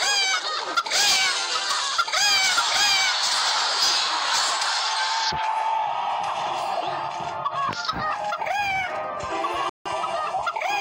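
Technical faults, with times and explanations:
9.69 to 9.86 s, rebuffering stall: the sound drops to silence for about 160 ms and then picks up exactly where it stopped. The player had run out of downloaded audio and paused until more arrived, so nothing is skipped, but the gap adds time.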